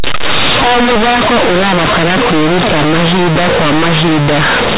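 From the first moment to the end, the speech suffers companded audio read as linear: A-law bytes are being played as plain 8-bit samples, never expanded. Because each sign change flips the output across half its range, quiet passages come out as loud as peaks, giving harsh, buzzy distortion and heavy noise in the pauses. The waveform looks like a dense, bent-out-of-shape block, and the spectrogram shows broadband energy everywhere, capped at 4 kHz by the 8 kHz telephone coding underneath.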